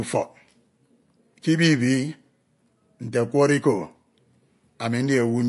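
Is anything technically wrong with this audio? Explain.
Yes. MP3 compression artefacts run through the whole clip, and the damage is plainly audible. Nothing in the speech reaches above 11.3 kHz, a hard ceiling that points to a bitrate around 48 kbps. With so few bits available, the encoder likely dropped the top band entirely and discarded weaker frequency components, which then flicker in and out between frames. The result is a dull, watery quality with swirling artefacts, chirpy s sounds and softened consonant attacks.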